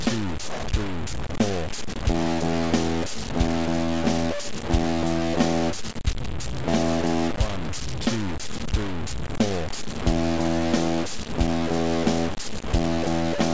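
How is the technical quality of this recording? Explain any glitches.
Pretty rough, honestly. From start to finish the audio sounds like low bit depth without dither, likely truncated to around 4 bits. With so few steps the error tracks the signal, so there's a grainy, gritty distortion only about 10 dB below the sound, and quiet stretches sputter or drop out. Separately, nothing comes through above 8 kHz, which fits a wideband call codec such as G.722.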